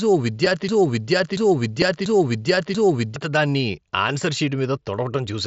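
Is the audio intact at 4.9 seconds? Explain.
Yes, the speech at 4.9 seconds is intact, with no fault at that moment.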